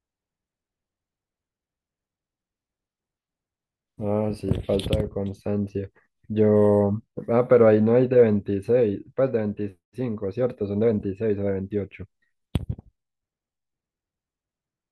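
No technical faults can be heard anywhere in the speech. Nothing in the recording calls for a time, a description or an explanation of something going wrong.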